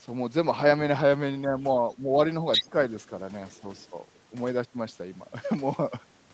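From 1.99 to 2.14 s the speech dips slightly, a brief drop in the talker's own level rather than any added sound. This is speech suppressed in double talk, likely the echo canceller turning down the near side while both ends were talking. At 2.52 to 2.63 s a second voice breaks in at roughly the talker's own loudness. That is the other side's voice leaking through, likely loudspeaker echo the canceller failed to remove. It is an extra voice layered on top, not a loss. Straight after, from 2.62 to 2.73 s, the speech is cut much more deeply, again likely double-talk suppression. A last, very faint scrap of the far voice surfaces at 3.77 to 3.87 s, far below the speech and likely leftover echo. All of this sits within the call path's band, which stops at 8 kHz.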